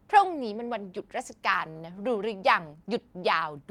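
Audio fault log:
1.70–1.82 s, short stall from a late packet, twice in a row: speech packets reached the receiver after they were due, so its jitter buffer ran dry at 1.70 s and again at 1.77 s. Each time, the receiver stretched the last stretch of sound, first by 50 ms and then by 25 ms, and carried on from the same point once the data arrived. Nothing is lost, but one sound is held unnaturally long with a faint buzzy or dipped quality, and what follows lands about 75 ms late.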